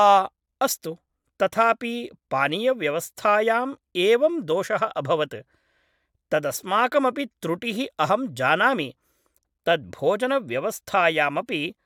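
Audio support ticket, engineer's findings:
No faults found in recording.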